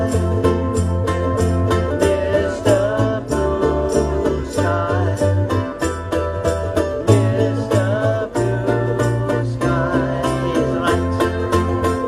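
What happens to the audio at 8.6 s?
Nothing goes wrong at 8.6 s; the audio there plays through intact, with no dropout, click or distortion.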